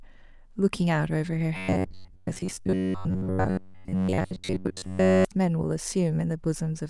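From 1.57 s to 5.25 s the speech goes robotic, the classic sound of repeated short buffers. The voice flattens into a stiff, metallic buzz locked at about 93.8 Hz, still loosely tracking the words. That buzz points to a chunk of roughly 10.7 ms being replayed over and over, likely because fresh audio kept arriving late, so most of the real signal in that stretch was skipped.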